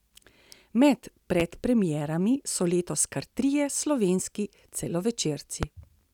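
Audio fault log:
1.40–1.43 s and 5.63–5.66 s, loud pop: single sharp thumps around 15 dB above the speech, likely a voltage spike, seen as tall vertical spikes and broadband spectrogram stripes.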